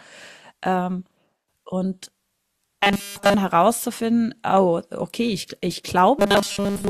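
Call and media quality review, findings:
Robotic sound from repeated short buffers, 2.83–3.35 s: speech collapses into a rigid metallic buzz at 200 Hz, tracking the words only loosely; essentially the whole stretch is repeated material. Likely a starved playout/jitter buffer looping the last 5 ms segment.

Same fault, 6.19–6.90 s, running to clip end: identical 200 Hz buzz, with most of the span repeated and some real audio leaking through. Mechanism: fixed-period repetition skips incoming audio and imposes its own pitch.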